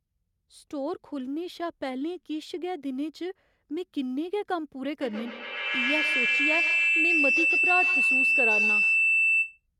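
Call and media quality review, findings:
Feedback howl, 5.01–9.64 s. Tone around 3 kHz, peaking about 6 dB above speech, pulsing roughly every tenth of a second. Probable component: two endpoints sharing one room; mic-to-speaker loop gains each pass. Unlike echo, repeats swell and narrow instead of decaying.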